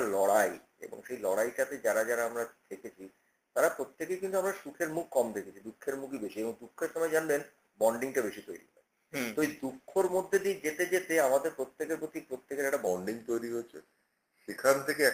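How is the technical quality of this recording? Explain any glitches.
Two glitches stand out, both after the nine-second mark.

The first is a call bitrate drop from 9.41 s to 11.13 s. The connection's bandwidth estimate fell, so the encoder was told to spend fewer bits. The rate slides from 32 kbps to 18 kbps and stays at its lowest for about 1.1 s. With fewer bits, the codec quantises more coarsely and may trim the top end. The sound turns rough and watery, then recovers.

The second is a section at the wrong speed, from 12.87 s to the end. Playback runs at 0.885 times the original rate. Speed and pitch fall together, so everything sounds slower and roughly two semitones lower. The likely cause is a player or editor clocking that stretch against the wrong rate. The shift is sudden.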